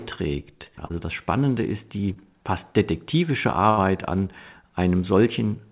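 Short concealed packet loss occurs at 0.86 to 0.91 s and again at 2.13 to 2.18 s. About 40 ms and then 20 ms of audio arrived too late, and the receiver bridged each hole by extending the preceding sound for 34 ms and 24 ms before blending back. Each is heard as a brief smear or wobble.

A burst of packet loss follows at 3.70 to 3.79 s, where roughly 80 ms went missing in a row. The receiver carried the last sound forward for 73 ms while fading it, giving a held buzz or dying hiss before the speech resumes further on. The audio between is skipped. Throughout, the narrowband call path leaves nothing above 4 kHz, consistent with a G.711-type codec.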